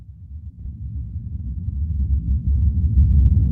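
At about 0.59 to 0.66 s there is a skip ahead. Roughly 0.7 s of audio was discarded while later material was already queued, so playback leaps forward. The two sides butt together with almost no gap. Unlike a dropout, there is no silence or filler, only a missing chunk.

From about 1.19 to 1.43 s a jitter buffer speed-up follows. The receiver trimmed repeated tiny pitch-period slices, around 50 ms in total, to shrink excess buffered delay. The sound runs about 115% fast and feels hurried. Unlike resampling, the pitch stays unchanged.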